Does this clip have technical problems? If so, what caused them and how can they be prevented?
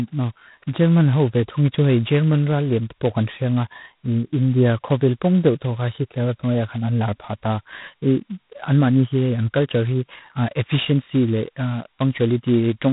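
Yes. Throughout the speech there is heavy G.726 ADPCM damage: a harsh, rasping hiss rides on every syllable and nothing passes above 3.9 kHz. The codec sends only a couple of bits per sample describing how far each sample strays from an adaptive prediction, so coarse quantisation errors pile up. The heavy rasp fits the lowest rate, 16 kbit/s. Unlike steady background noise, the hiss rises and falls with the speech level and drops away in pauses. To prevent it, run the link at 32 kbit/s or use a wideband codec.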